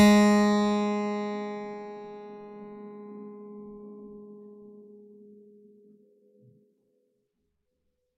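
Nothing goes wrong anywhere in this bit of music, so there's nothing here to point at.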